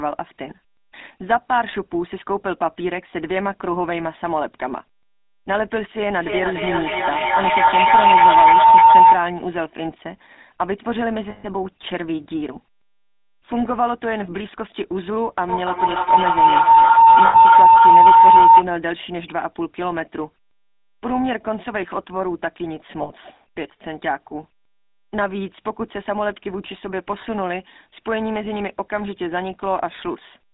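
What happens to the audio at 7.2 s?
A feedback howl runs from 6.18 s to 9.25 s, so 7.2 s falls in the middle of it. Two devices in the same room are on the call, and each trip from loudspeaker back into microphone adds level, so the echoes build instead of dying away. They narrow to a tone of around 1 kHz, with a loop delay of roughly a third of a second. At its peak it sits about 12 dB above the speech.

Underneath, the whole clip carries GSM full-rate codec damage, and it is plainly audible here. The codec rebuilds speech from a vocal-tract model excited by regularly spaced pulses, keeping only a fraction of the excitation detail. That gives the voice a buzzy, gravelly edge. The line is confined to about 200 Hz to 3.7 kHz, which fits the 13 kbps full-rate stream.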